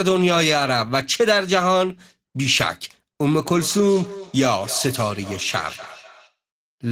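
From 3.44 s to 6.37 s the speech comes back to itself as a feedback echo between two devices: one device plays what another device's microphone sent, and that microphone picks it up again. Each device's echo canceller removes only its own playback, so the loop survives. The repeats return at a steady interval of roughly 300 ms, peaking at about 16 dB below the speech. That fixed, evenly spaced return sets it apart from the smooth, diffuse tail of room reverberation.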